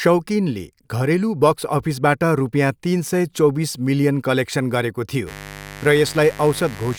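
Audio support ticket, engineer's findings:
Mains buzz from 5.25 s to the end of the clip. Steady, raspy buzz under the speech, roughly 15 dB below it. Based on 50 Hz mains. Probable component: dimmer, rectifier or an unshielded cable. Mechanism: sharp switching spikes enter twice per mains cycle. They produce a dense series of 50 Hz harmonics reaching into several kHz, which gives the rasp rather than a pure hum.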